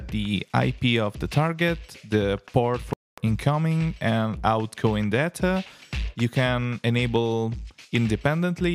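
Audio packets likely failed to reach the headphones in time, a Bluetooth dropout: the sound cuts out abruptly from 2.93 to 3.18 s, about 240 ms, then resumes further along.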